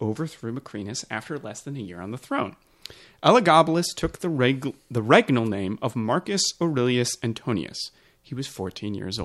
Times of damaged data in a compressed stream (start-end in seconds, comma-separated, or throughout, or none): none